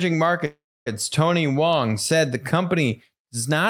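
At 0.45 s the speech hits a call audio freeze that lasts until about 0.88 s. You hear the last bit of sound smeared out into a fading buzz, then roughly a quarter second of silence before the talker resumes right where they left off. Nothing seems to be lost. The likely cause is packets stalling in transit and the jitter buffer running dry, which pushes everything after it back by about 0.41 s.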